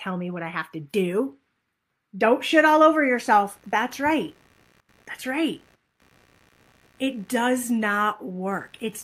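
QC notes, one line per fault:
2.50–9.04 s, computer activity noise: a buzzing, chirping layer roughly 35 dB below the speech, pulsing around 70 times a second and following no pattern of the speech itself. Changing processor or graphics load is disturbing the ground shared with the audio circuit.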